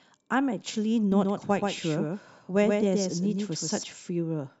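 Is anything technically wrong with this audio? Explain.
Yes. From 1.12 to 3.84 s there is a doubled audio track, likely from a second, slower capture path mixing in a copy of the speech. That copy trails by around 150 ms at roughly 5 dB lower level, producing a dry slapback echo that switches on and off abruptly.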